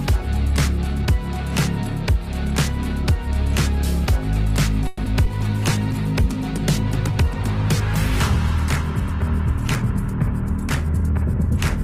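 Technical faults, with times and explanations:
4.87 to 5.00 s, call audio freeze: the sound stretches into a fading buzz or hiss for about 110 ms, likely from delayed packets emptying the jitter buffer, then resumes intact.
5.04 s and 5.25 s, short concealed packet loss: about 20 ms goes missing each time. The receiver patches it by extending the last sound, causing a brief smear or wobble.
5.27 to 11.32 s, call bitrate drop: the encoder falls from 48 to 16 kbps, staying lowest for about 4.3 s. Coarser coding makes the sound rough, watery or duller.
10.85 to 11.48 s, jitter buffer speed-up: the receiver trims tiny pitch-period slices, roughly 70 ms in all, so the audio runs about 9% faster at unchanged pitch.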